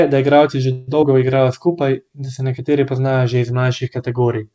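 Speech, carried over a call link whose G.722 coding leaves nothing above 8 kHz. Just after "da igralci že", from 0.72 to 0.90 s, there is a call audio freeze. The last sound is drawn out into a fading buzz or hiss for about 156 ms. Then the speech resumes where it stopped, with nothing lost. The likely cause is packets held up in transit, so the jitter buffer ran dry and the receiver padded the wait. A short concealed packet loss follows at 1.02 to 1.04 s. About 40 ms of audio never reached the decoder in time. The receiver briefly extended the preceding sound and blended back into the real signal, giving a quick smear or wobble. Because the missing stretch was dropped rather than waited for, playback also catches up by roughly 30 ms, taking back part of the earlier delay.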